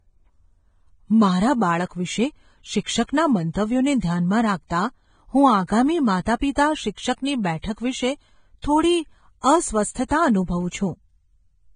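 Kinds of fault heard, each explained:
Vorbis compression: The whole clip has the hissy, grainy texture of heavy lossy coding, most likely Vorbis at a low setting, which fits a bitrate somewhere around 22 kbps. Nothing survives above 9.7 kHz, so the top end of the speech is cut off, and the treble that remains was quantised so coarsely that its fine detail has turned into noise of similar energy. Tones sound rough and consonant onsets are blurred throughout.
Pre-echo: Twice a smear of hiss arrives just ahead of a sharp onset, once from 9.41 to 9.44 s and again from 10.08 to 10.11 s, each about 27 to 28 ms long. A transform codec spreads its quantisation noise across a whole block, so when a hard attack lands late in that block, noise sized for the loud part fills the quiet gap before it. The attacks then sound softened rather than crisp.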